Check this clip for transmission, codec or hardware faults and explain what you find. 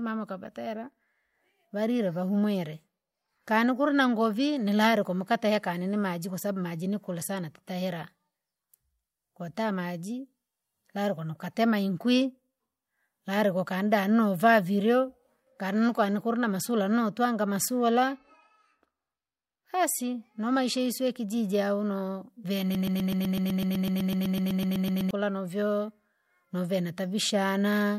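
One fault is present, a broken-record loop from 22.75 s to 25.11 s. A roughly 126 ms fragment of the speech repeats exactly, back to back, 19 times. This is likely a stalled player or stream resending its last buffered piece, and the speech that should have played there is lost. On the waveform and spectrogram it shows as an identical short pattern tiled at a regular 126 ms spacing.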